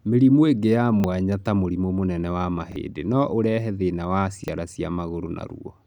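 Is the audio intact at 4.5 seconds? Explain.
No. Right after "no ũrehe thĩna wa", a repeated buffer occupies 4.44 to 4.48 s. New audio failed to arrive in time, so the playback device replayed the previous 40 ms chunk once, which fits a 40 ms buffer. The speech briefly stutters, with a hard join at the seam, and roughly 40 ms of real audio is lost. On a waveform, two identical 40 ms segments sit side by side with a sudden step where they meet. A spectrogram shows the same pattern twice in a row, separated by a thin vertical broadband line at the join.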